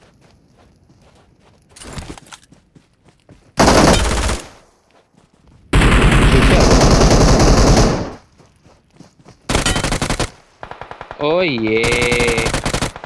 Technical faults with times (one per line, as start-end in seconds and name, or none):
none